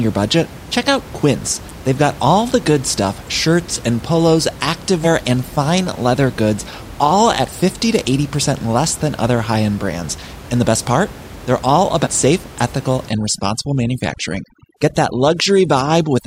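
Around 0.43–0.46 s, 5.03–5.07 s and 12.03–12.07 s, compressed frames get skipped. A few 42.7 ms frames drop out each time, so the audio jumps ahead roughly 150 ms. From 13.09 s to the end, overdone noise removal strips away the room noise, which sat about 18 dB under the speech, leaving a lowered background that breaks up into twinkly specks.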